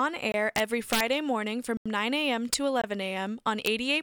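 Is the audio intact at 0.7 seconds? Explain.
No. Integer overflow runs from 0.56 to 1.0 s: peaks overdriven by about 4 dB wrap to the opposite sign instead of limiting, producing violent, sharp cracks on loud speech.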